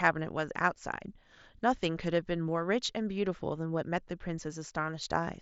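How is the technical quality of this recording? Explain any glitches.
No glitches to report: the speech comes over what sounds like a wideband Bluetooth headset link using the mSBC codec, band-limited to about 8 kHz, and nothing in it registers as a fault.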